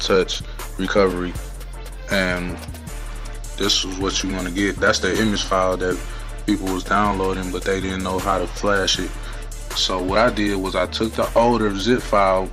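No technical fault can be heard anywhere in the recording. The audio runs without any interruption, distortion or level problem to point to.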